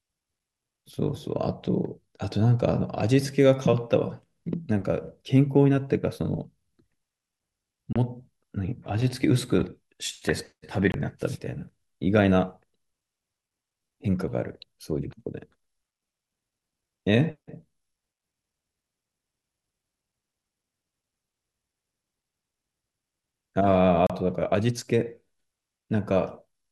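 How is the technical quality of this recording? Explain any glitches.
The speech is broken by three brief dropouts, each most likely a Bluetooth stall. They occur at 7.93 s (about 28 ms of silence), 10.92 s (about 22 ms) and 24.07 s (about 32 ms). Each is an abrupt cut to silence that resumes where it stopped, heard as a tiny hiccup. The likely cause is interference delaying packets until the headphones' buffer emptied. On a waveform, each shows as a flat gap; on a spectrogram, as a thin vertical blank band across all frequencies.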